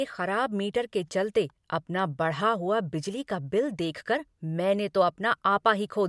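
Listening carefully to the speech here, nothing stood out as a technical fault at any point.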